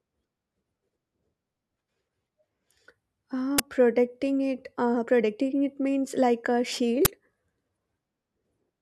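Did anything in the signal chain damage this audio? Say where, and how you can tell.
Yes, at the buffer stage. An uninitialised buffer bursts loudly at 3.58 s, before "protecting it uh protecting", and at 7.05 s, after "it means like a". Each lasts about 11 ms, which fits a 512-sample block played back before it was filled.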